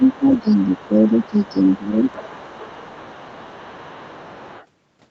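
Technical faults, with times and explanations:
0.00–0.72 s and 0.91–2.05 s, speech suppressed in double talk: the talker's speech sinks by about 10 dB in patches, adding up to roughly 0.4 s in the first stretch and about half a second in the second, while a second voice is audible underneath. That's most likely the echo canceller failing to pull the near talker apart from the loudspeaker echo while both sides talked, so it ducked everything at once.
0.04–4.66 s, other side's voice leaking through: a faint second voice sits roughly 25 dB under the main speech for almost the whole clip, still audible beneath the fade-out that ends at 2.94 s. It's quiet but persistent, and it's most likely far-end audio from the loudspeaker that the echo canceller didn't fully strip out before the signal was Opus-coded.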